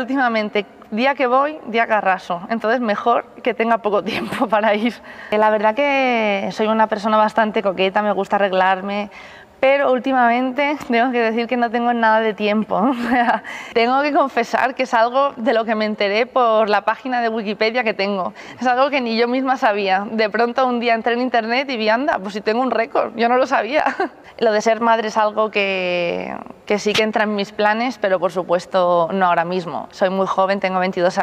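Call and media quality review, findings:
Nothing to flag here; the audio holds steady the whole way with no dropouts, glitches or level jumps worth a ticket.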